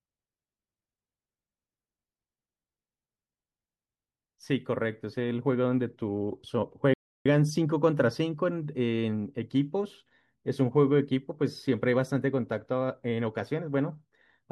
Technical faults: playback stall

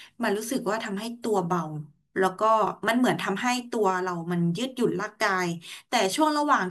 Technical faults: none

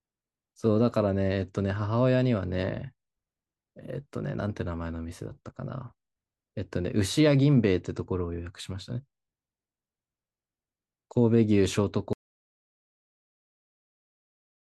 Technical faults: audio dropout to silence

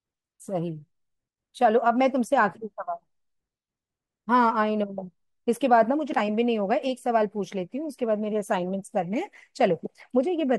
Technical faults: none

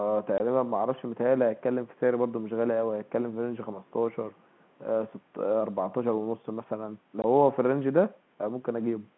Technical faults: packet loss filled with silence; echo leak

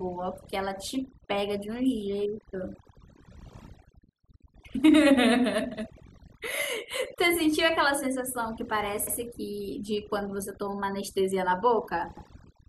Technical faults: overdone noise removal; overlapping chunks

